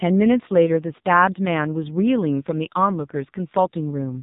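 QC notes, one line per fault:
Throughout: AMR narrowband mobile codec. The speech is squeezed through AMR-NB, so the spectrogram shows a hard ceiling with nothing above 3.8 kHz and a blank region over it. Heavy codec damage leaves the voice buzzy and synthetic, because a vocal-tract model excited by sparse pulses stands in for the real waveform. This points to a low bitrate of about 6 kbps. Harmonics look smeared and blocky from frame to frame, and the waveform envelope looks coarse and stepped.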